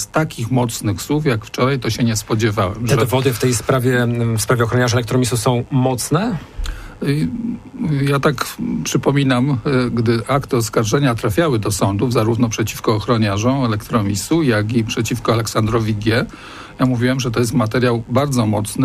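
From start to finish a mains buzz sits under the sound, a steady, raspy tone tied to the 50 Hz supply. Sharp switching spikes, of the kind a dimmer, rectifier or poorly shielded cable lets through, are entering the signal path twice per mains cycle, so the interference carries a dense stack of 50 Hz harmonics reaching into the kilohertz range. It stays roughly 30 dB below the wanted signal, constant in level and character.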